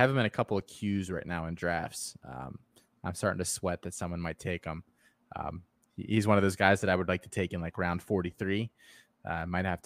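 At 0.60 s, between "him in a couple" and "queues right now in", a 5.8 ms block of digital silence ticks: a 256-sample buffer likely went unfilled in time. The waveform drops to near silence, and the spectrogram shows a thin gap with broadband click edges.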